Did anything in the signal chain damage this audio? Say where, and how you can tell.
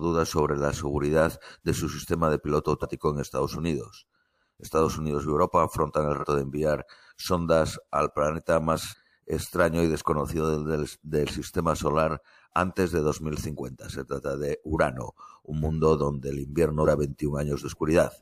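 Yes. The damage sits at the codec/storage stage: compressed frames skipped. Whole frames of the encoded speech never reached the output, either missing from the file or rejected by the decoder as corrupt, so playback jumps forward. It happens at 2.81 s, at 6.20 s between "afrontan el" and "de enviar sondas al", at 8.90 s after "enviar sondas al planeta", and at 16.84 s after "mundo donde el invierno". Each jump drops roughly 100 to 150 ms, a multiple of the 46.4 ms frame.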